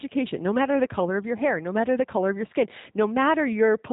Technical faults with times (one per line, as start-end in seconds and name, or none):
0.00-3.93 G.729 codec